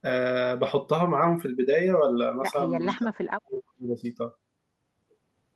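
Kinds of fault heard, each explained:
Echo leak: From 2.87 to 2.98 s there's a short delayed copy of the speech, trailing it by about 428 ms and sitting roughly 15 dB below it. The likely cause is a far-end echo canceller that didn't fully remove what its loudspeaker fed into the microphone.
Speech suppressed in double talk: From 2.97 to 4.05 s the talker drops away hard, in places by around 40 dB, for close to a second in total. Both ends seem to be talking here, and the echo canceller likely couldn't separate the two, so it turned everything down.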